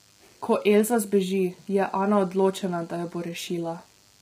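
A DECT cordless phone buzz runs under the speech from start to end. Its 100 Hz radio bursts are rectified, giving a thin, harmonic-rich buzz well below the voice.

Heavy roughness and graininess also persist throughout, with noise between harmonics. Low-delay AAC compression is the likely cause, at a rate that fits roughly 24 kbps.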